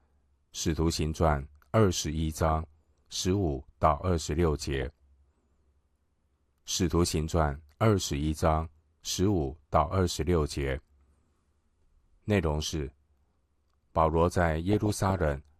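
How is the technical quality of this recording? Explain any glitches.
Technical quality is poor: the speech is dull and grainy throughout, and four bursts of reception damage break through on top.

MP2 compression is the likely cause of the constant dullness. The encoder appears to be short of bits, which fits a low rate of around 80 kbps, so it switches off upper sub-bands and quantises the remaining ones coarsely. The result is muffled speech with a plainly audible gurgling, granular texture that flickers as bands drop in and out.

DAB burbling occurs at 2.34–2.83 s, 4.75–4.90 s, 8.00–8.13 s and 14.71–15.36 s. Weak reception let bit errors, somewhere under one percent, slip past error correction into the audio data. Corrupted samples put short blips of noise into single sub-bands, and corrupted scale factors make sub-bands jump in level for up to a frame. Each burst adds these blips over the speech, and the first and last bursts are the longest.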